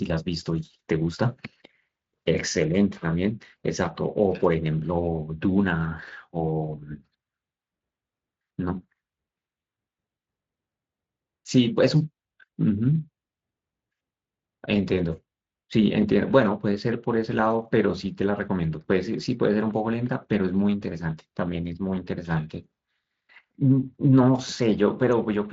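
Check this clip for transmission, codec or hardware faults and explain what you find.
I find no faults in this clip.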